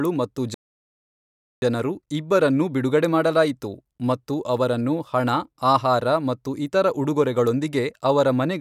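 At 0.54 s the speech cuts off mid-flow and the output falls completely silent for about 1.08 s, resuming at 1.62 s. The gap is just an abrupt halt and restart. This is a playback stall, likely caused by the player running short of buffered data or having its audio thread blocked, so nothing reached the output until it recovered and carried on.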